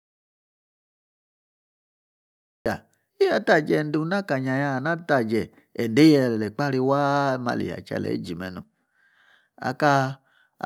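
From the opening until 2.66 s there is an audio dropout to silence: silence with no room tone, then the speech cuts in abruptly. The input was likely lost or muted while recording continued. The waveform shows a flat line, and the spectrogram a blank band.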